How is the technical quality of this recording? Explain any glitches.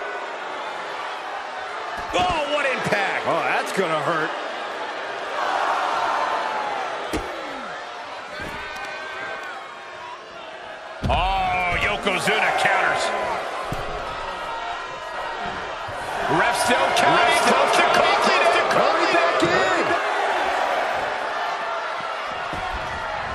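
One glitch stands out. Doubled audio track, 15.1 to 20.0 s: a second full-band copy, likely from a slower capture path or misaligned edit, trails about 0.7 s behind, a few dB quieter, starting and stopping abruptly without decay.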